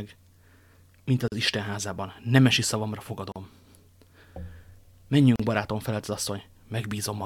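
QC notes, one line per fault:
1.28–1.32 s, 3.32–3.36 s, 5.36–5.40 s: gap at a join of encoded pieces. The speech cuts to silence for 38–41 ms, after "mint az" and before "barátom felelt az", with smeared edges, then resumes where it stopped. The 2.0 s spacing points to separately encoded segments joined without trimming each run's start delay and final-frame padding.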